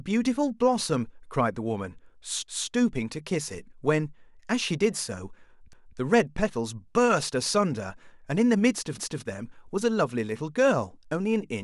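Overlapping chunks: each 3-second chunk begins 250 ms before the last ended, so that slice of speech replays as a stutter at 2.48–2.73, 5.73–5.98 and 8.98–9.23 s.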